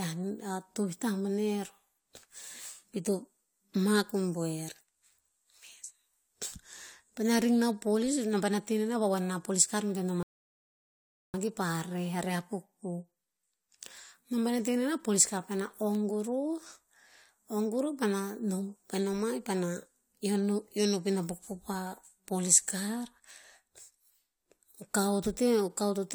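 A rebuffering stall at 10.23 to 11.34 s: the player's buffer ran dry, cutting to silence for 1.11 s before the speech resumed exactly where it stopped.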